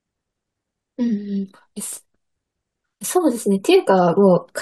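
No technical faults are audible anywhere in the recording.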